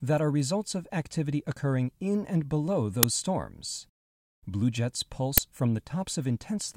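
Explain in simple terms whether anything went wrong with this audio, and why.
Two sudden cracks break into the speech, at 3.03 s and again at 5.38 s. Both are an uninitialised buffer: a tiny block of audio, 5 ms and then 10 ms long, was played before any sound was written into it, so leftover memory came out as noise.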